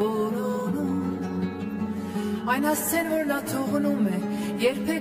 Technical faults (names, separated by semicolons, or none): channel delay (comb filtering)